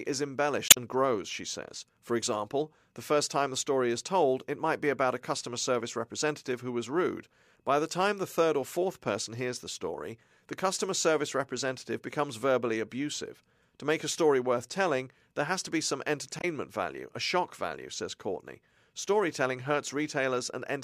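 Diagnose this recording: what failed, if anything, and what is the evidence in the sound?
Codec-stage failure: damaged data in a compressed stream. Brief glitches at 0.67 to 0.77 s, just before "grows she says", and 16.39 to 16.45 s, between "has to be some" and "value a shock value". Corrupted frames are misdecoded until the decoder resynchronises on a later frame header.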